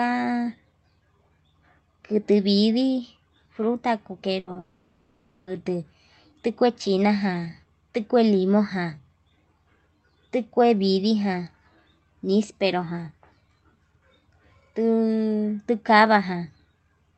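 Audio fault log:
4.39–4.50 s, burst of packet loss: about 80 ms is lost and the receiver stretches the last sound into a fading buzz or hiss. It is longer than a tick, and audio resumes further on.
4.51–4.58 s, short concealed packet loss: a 40 ms hole is patched from the preceding sound and blended back. It is heard as a brief smear or wobble, not a sustained fade.
4.59–5.50 s, long network dropout: for about 0.9 s the last sound is carried on as a decaying buzz or hiss with no true silence, likely from a network dropout. Roughly 880 ms of audio never returns.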